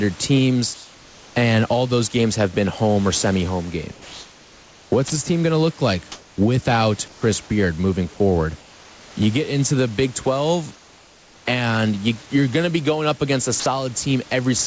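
Between 0.74 and 1.36 s the pauses in this speech lose their detail and become a steady, featureless hiss, about 1 dB quieter than the real room background. That is comfort noise in place of the background, likely from discontinuous transmission: the sender stops sending during silence, and the receiver synthesises noise roughly matching the background's level and colour. The same flat fill returns from 3.92 to 5.10 s, between "home or semi home" and "this team going to", and for about 400 ms within 6.12 to 7.22 s. It recurs from 8.60 to 9.16 s and from 10.74 to 11.46 s just before "and you are going", each of those about 3 dB quieter than the genuine background. Apart from the last 20 ms of the 3.92 s stretch, no sound is missing in these stretches, and the room noise sitting about 25 dB below the speech comes back intact when the speech resumes. That tells them apart from the next fault.

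At 5.08 s, about 20 ms of sound just before "this team going to" is lost. From 13.60 to 13.66 s, 60 ms of the sound itself vanishes into noise. This is sound dropped by the voice detector, likely because it judged the sound to be background and stopped sending until it triggered again. Here actual sound is lost, not just room tone. Across the clip, nothing reaches above 8 kHz, consistent with the G.722 call codec.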